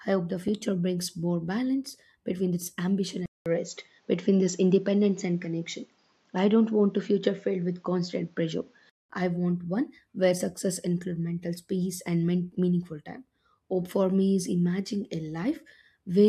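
Speech that turns duller and boxy from 3.26 s to 9.10 s, after "balance between this ambition", with nothing above 7.5 kHz, a faint new background noise and a small level shift. A 200 ms silence marks the switch. The likely cause is the input switched to a poorer device, and the sound clears again before "I want one where".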